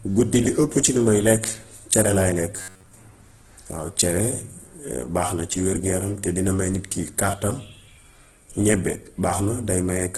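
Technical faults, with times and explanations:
throughout: Opus compression. The encoder was likely starved of bits, around the 12 kbps range in its music mode, so it filled bands with folded or noise content. The speech turns rough and grainy, and nothing remains above about 12 kHz.
2.56–2.94 s: robotic sound from repeated short buffers. Audio likely arrived too seldom, so playback looped a segment of about 10.7 ms while most real audio was skipped. The loop imposes a fixed 93.8 Hz buzz, making the speech a rigid metallic buzz.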